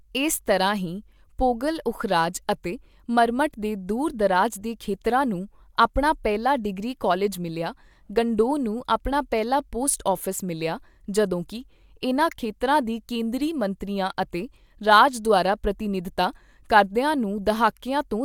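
No technical faults can be heard anywhere in the recording.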